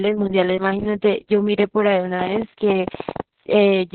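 Opus voice compression runs throughout the speech and is heavy. The codec is in its SILK linear-prediction mode at narrowband, so nothing survives above about 4.2 kHz and the voice sounds muffled and boxed-in. The excitation is coded so coarsely that the speech turns hoarse and faintly robotic. That degree of damage points to a very low bitrate, around 6 kbps, with long 60 ms frames.

A train of clicks runs from 2.21 to 3.21 s: around ten sharp, similar-shaped pulses arrive at about 11.2 per second, spaced irregularly rather than on a steady beat. They stand roughly 10 dB above the speech, so they register as a rattling tick over the voice and through any gap. The likely cause is interference from nearby equipment or a faulty connection or power supply injecting pulses into the signal.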